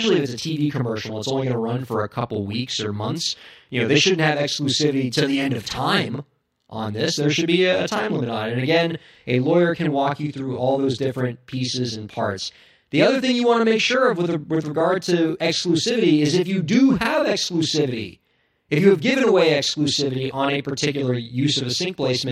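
A speech recording with channel delay (doubling) running the whole way through. One channel arrives 40 ms late, and once the two are summed to mono, that late copy sits beside the original at equal level, giving every syllable a close, slapback-like double.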